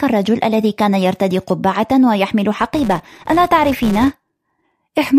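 From 2.60 to 4.73 s, a filter restarted on every block. It loses its state, clicking at each block start. This gives a 188 Hz buzz, which fits 256-sample blocks.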